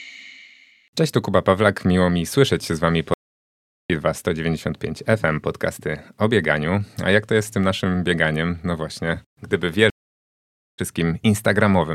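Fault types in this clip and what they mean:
Stream reconnect, 3.14–3.90 s and 9.90–10.80 s: the connection drops, leaving 750 ms then 880 ms of silence, and a restarted decoder rejoins the stream further along, skipping about a second, then under half a second, with a brief fade-in.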